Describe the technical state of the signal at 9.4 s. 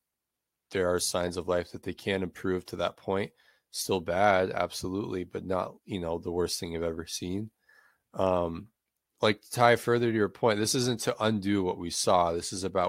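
At 9.4 s the speech signal is intact, with no audible fault at that moment.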